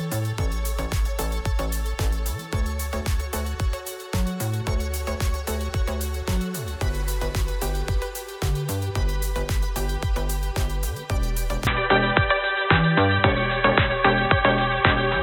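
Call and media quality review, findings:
From 11.67 s to end, no gap at the changeover: nothing above 4 kHz, level shifts some 5 dB, faint new noise floor. Likely input switched to a poorer device.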